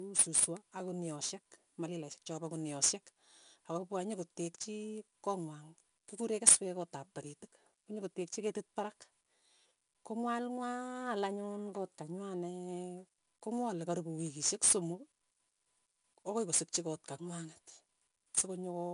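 Throughout, gritty hiss clings to louder speech and nothing reaches above 10.6 kHz. This comes from 4-bit ADPCM compression, whose coarse predicted steps add noise that follows the level.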